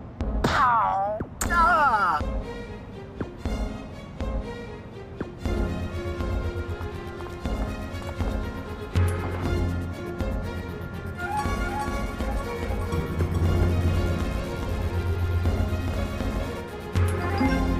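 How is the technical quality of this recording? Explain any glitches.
There is one fault: from 11.35 to 16.61 s, a doubled audio track, with a full-band copy trailing by roughly 400 ms, a few dB quieter, likely from a second, slower capture path.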